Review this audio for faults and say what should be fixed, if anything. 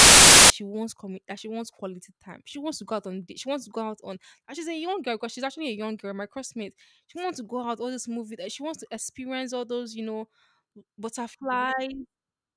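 From 0 to 0.5 s, file tags are played as audio. An embedded cover picture is decoded as samples, giving a hard-edged burst of very loud white noise. Fix it by parsing and skipping tag blocks before decoding.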